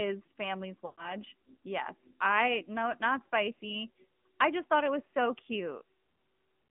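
The whole recording carries the AMR narrowband mobile codec. Nothing survives above about 3.4 kHz or below 150 Hz, and the speech has a plainly audible buzzy, synthetic edge, which fits a mid-rate mode near 10 kbps. On a spectrogram the energy stops flat at that ceiling, and the harmonics look smeared.

From 0.86 to 1.10 s there are lost AMR speech frames. The decoder repeats the last good settings at falling gain for about 120 ms, which fits six 20 ms frames. The result is a drawn-out, fading buzz that returns rough. The waveform shows a decaying envelope, and the spectrogram shows frozen harmonics.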